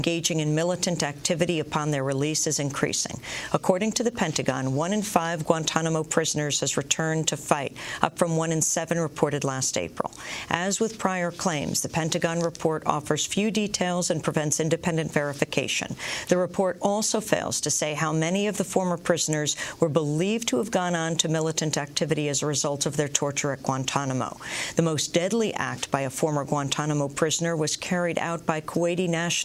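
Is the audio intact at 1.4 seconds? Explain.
Yes, at 1.4 seconds the audio is intact, with no dropout, click, distortion or other fault to be heard there.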